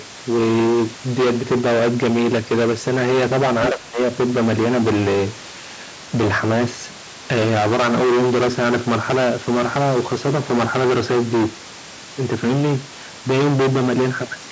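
Speech recorded through call microphone processing, with nothing above 8 kHz, carries hard clipping from start to finish: the signal is driven roughly 21 dB beyond what a converter, number format or other stage can pass, so something like a third of the waveform is sheared flat, adding dense high harmonics that turn every loud sound into harsh, buzzing fuzz. From 3.72 to 3.99 s the speech is suppressed in double talk, likely because an echo canceller could not separate the talker from overlapping loudspeaker echo and turned both down, so the level sinks by about 20 dB for roughly 300 ms.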